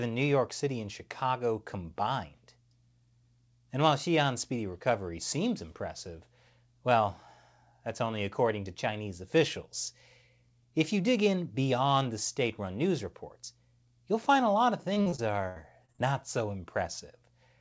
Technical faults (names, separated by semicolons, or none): repeated packet loss (robotic sound)